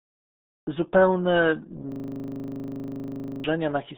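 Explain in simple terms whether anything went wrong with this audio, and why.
The speech was squeezed through the RealAudio 14.4 codec, an old format built for dial-up modems, which keeps only a narrow slice of the sound and throws away everything above about 3.8 kHz. That missing top end is why the whole clip sounds muffled, as if heard down an old phone line, and the heavy compression adds a gargly, underwater quality to the voice from start to finish.

From 1.92 to 3.44 s there is a system hang loop. The computer froze, but the sound hardware kept replaying the last scrap of audio it held, a piece only 40 milliseconds long, over and over. Repeating 25 times a second, it turns into a steady buzzing drone instead of speech, and roughly a second and a half of the real recording is lost under it before the sound recovers.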